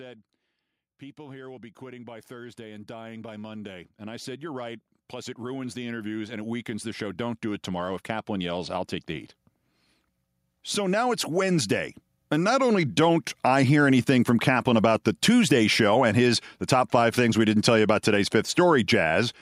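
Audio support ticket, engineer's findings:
Speech and background noise swell together, 1.16 to 9.01 s, up about 18 dB by "the heat". Automatic gain rising: AGC judged input too quiet, ramped gain slowly over several seconds.

Second swell, 10.74 to 13.73 s, about 6 dB, settling before "anything from". Same AGC: gain lifted again over a shorter ramp, floor rising in step with speech.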